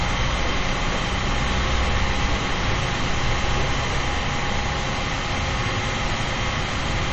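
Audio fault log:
Throughout, MP3 compression: there's nothing at all above 8.2 kHz, so the top end just stops dead, and the quieter detail underneath has that watery, swirly shimmer as faint frequency components flicker in and out from one frame to the next. Transients sound smeared too. That's the likely result of an MP3 encoder running short of bits, dropping the treble and zeroing weak content, and how plainly you can hear it fits a low bitrate around 32 kbps.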